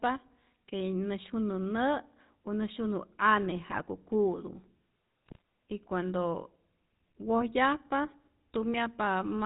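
Throughout the speech there is a buzzy, gravelly roughness with nothing above 4 kHz. This is the GSM full-rate codec, which fits a 13 kbps link, rebuilding the voice from a vocal-tract model fed by coarse, regularly spaced pulses. From 3.66 to 3.81 s and again from 5.26 to 5.41 s, the sound breaks into brief squawks and gargling. These are GSM bit errors: corrupted filter, pitch and gain values reached the decoder and distorted several consecutive frames.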